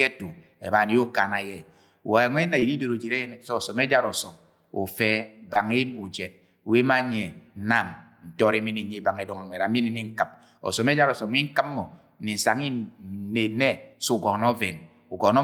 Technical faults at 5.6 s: short concealed packet loss

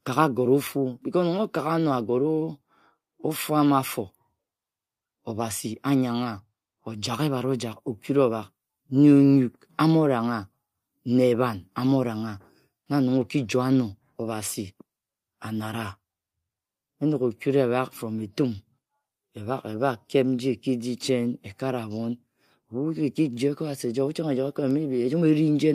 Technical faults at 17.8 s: none

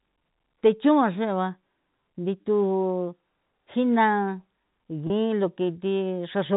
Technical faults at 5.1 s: packet loss with pitch repetition

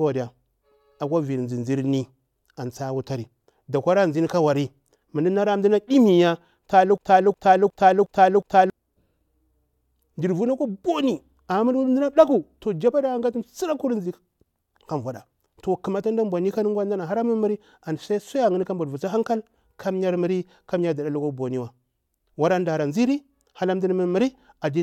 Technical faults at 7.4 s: broken-record loop

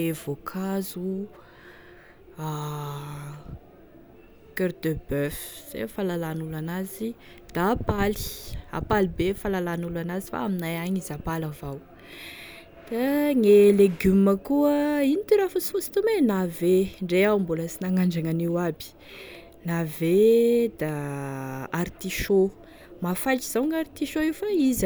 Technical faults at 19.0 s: none

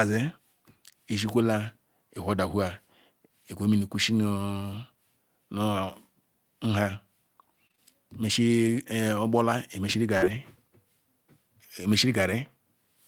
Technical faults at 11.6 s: none

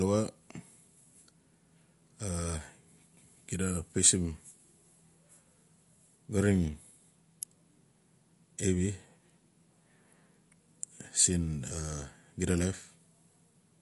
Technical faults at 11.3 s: MP3 compression

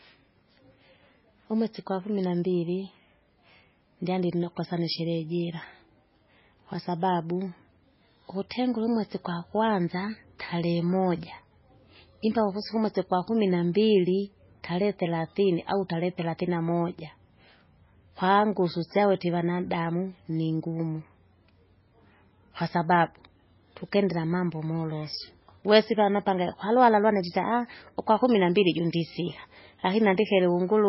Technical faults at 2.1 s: MP3 compression

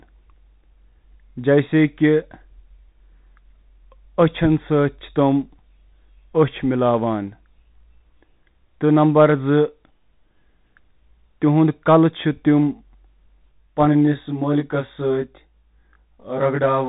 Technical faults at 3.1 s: Bluetooth CVSD headset codec

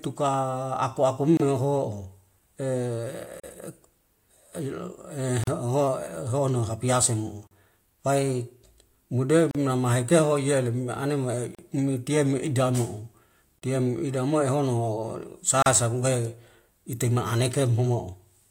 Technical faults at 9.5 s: gap at a join of encoded pieces

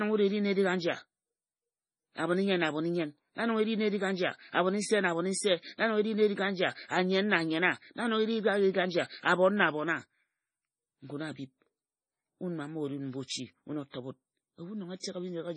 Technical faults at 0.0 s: MP3 compression

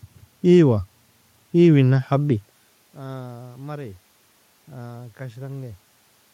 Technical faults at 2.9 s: drift correction step

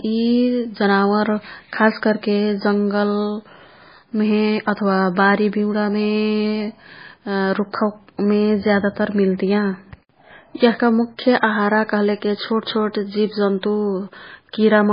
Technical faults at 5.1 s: MP3 compression

